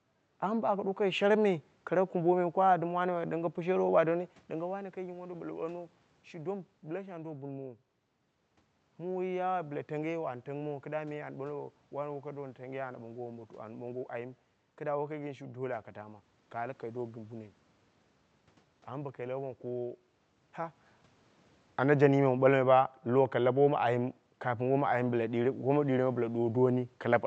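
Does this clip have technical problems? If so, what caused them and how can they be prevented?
No, nothing here points to a system fault: the background noise belongs to the room, and the level shifts near 4 s and 20.5 s come from the talker moving relative to the microphone.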